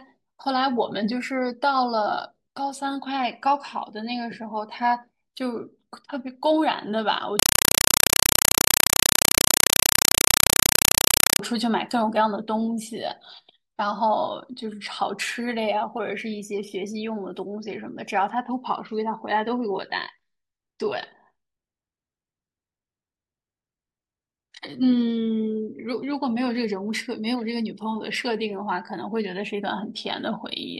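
From 7.39 to 11.39 s, chattering static in 4 ms bursts at 31.25 Hz replaces speech: a compressed stream played as audio, undecoded Dolby Digital.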